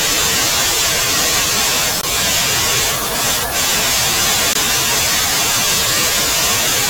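Speech with a gap between chunks: short holes at 2.01 to 2.03 s and 4.53 to 4.55 s, each 20 ms long and spaced 2.5 s apart. The audio was handled in 2.5 s chunks with silence inserted at each join, so nothing is lost, but the flow breaks abruptly there.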